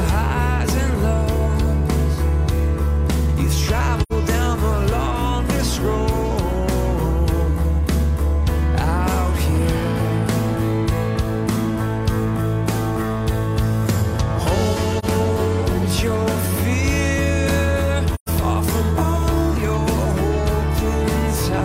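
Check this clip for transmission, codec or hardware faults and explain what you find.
The clip has AAC frame loss with muting in three places: 4.02 to 4.12 s, 14.99 to 15.05 s and 18.15 to 18.29 s. Each gap's length, about 85, 43 and 128 ms, fits two, one and three lost frames of roughly 43 ms. The decoder zeroed the missing spectrum, and the overlapping windows fade sound out and back in, leaving a brief dip and soft-edged holes. A hard sample dropout would instead cut abruptly and usually click.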